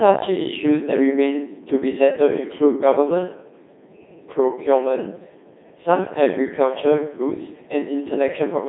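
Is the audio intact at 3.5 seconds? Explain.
No. At 3.5 seconds, as for the whole clip, the speech passes through a Codec 2 vocoder. Instead of carrying the waveform, it sends only pitch, voicing, energy and a coarse spectral envelope, then rebuilds the voice from sine waves. The heavy damage fits a rate around 2.4 kbit/s. The result sounds robotic and buzzy, confined to a narrow band of roughly 200 Hz to 3.7 kHz, with nothing above 3.8 kHz.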